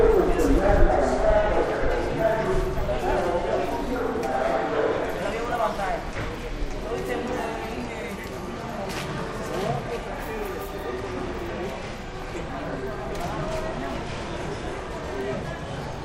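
No technical faults are audible anywhere in this recording of sounds.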